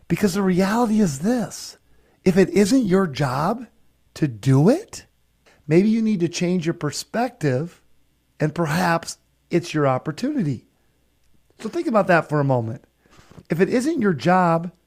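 For the first 4.0 s the speech sounds dull and swirly, with thin, smeared treble, then at 4.0 s it turns clear with no gap. That is an adaptive stream starting at a low bitrate, fitting Opus around 24 kbit/s before stepping up near 64 kbit/s.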